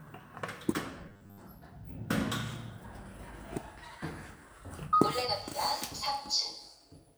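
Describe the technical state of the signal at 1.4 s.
Robotic sound from repeated short buffers runs from 1.09 s to 1.40 s, ending right at this moment. New audio likely arrived too seldom, so a chunk of about 10 ms was replayed over and over while most of the real sound was skipped, imposing a rigid, metallic 100 Hz buzz.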